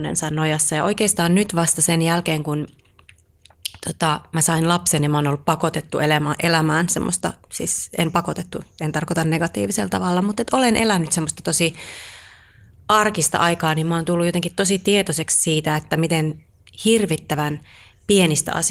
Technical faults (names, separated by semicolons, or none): none